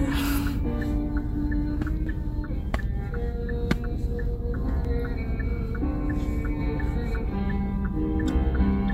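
Damaged data in the compressed stream appears at 2.06 s and again at 4.85 s. Each time the decoder hits corrupted bytes, misreads the frame, loses sync and hunts for the next frame header, leaving a brief glitch cutting across the sound.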